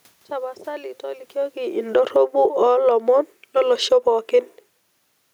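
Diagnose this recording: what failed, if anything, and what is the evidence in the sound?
Automatic gain falling, in call processing: the level sinks about 12 dB from 1.36 to 2.88 s and about 6 dB from 3.41 to 4.1 s. Room noise sinks with it, which a talker moving wouldn't cause.

Automatic gain rising, also call processing: sound and room noise swell together, about 4 dB from 2.33 to 3.44 s and about 5 dB from 4.01 to 4.51 s, after the input dropped about 24 dB.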